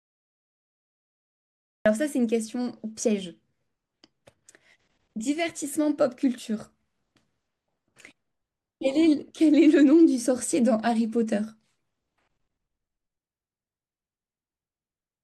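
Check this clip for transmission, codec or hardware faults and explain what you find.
There is one fault, a cut-off start. The capture or stream began late, after the talker was already mid-sound, so the opening portion was never recorded. From 0 to about 1.86 s the clip holds only digital silence, and at 1.86 s the speech switches on abruptly in the middle of a sound, with no natural onset or fade-in. The first syllable arrives truncated, as though the sound had been sliced off at its front edge.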